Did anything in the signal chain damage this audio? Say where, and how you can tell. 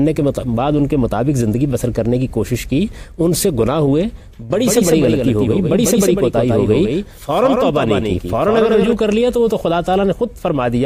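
Yes. From 4.55 s to 8.93 s a doubled audio track appears, most likely because the same signal reaches the mix twice, once directly and once through a slower routing or capture path. A second, full-band copy trails the original by roughly 150 ms at about 5 dB lower, with no decay or room colour. The result is a dry, slapback-like repeat that switches on and off abruptly at those two times.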